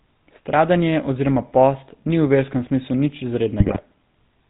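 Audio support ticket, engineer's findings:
Buzzy, gravelly roughness on the speech for the whole clip, the kind that is hardest on high voices; nothing audible above 4 kHz. Component: GSM full-rate codec, at a rate that fits its 13 kbps. Mechanism: vocal-tract filter driven by a sparse, regularly spaced pulse excitation, with only every third excitation sample kept, so fine detail is lost and the buzz is plainly audible. Band limit follows from the narrowband coding.

Squawks, pops and gargling from 3.6 to 3.82 s, with level and tone lurching frame to frame. Component: GSM bit errors, flipped bits reaching the speech decoder, with an error density that fits a bit error rate near 2.7 percent. Mechanism: corrupted filter, pitch and gain parameters warp the spectrum or spike the level on each hit frame, so the voice breaks up for about 0.22 s.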